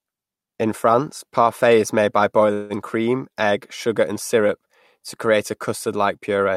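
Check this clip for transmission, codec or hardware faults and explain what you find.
There's one call audio freeze, from 2.53 to 2.73 s. The sound stalls into a brief fading buzz, then resumes exactly where it stopped, nothing lost, just 165 ms added delay. Likely cause: delayed packets emptying the jitter buffer, so the receiver stretched the last sound.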